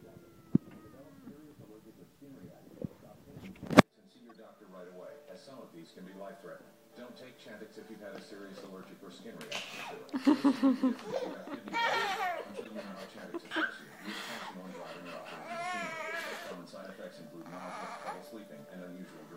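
Corrupt frame decoded at 4.29–4.40 s, 11.10–11.12 s and 12.56–12.68 s: damaged compressed frames were played anyway, so misread gains and codes put energy at wrong frequencies. Each is a brief blip or chirp. The 11.1 s one is loudest, the 4.3 s one faintest.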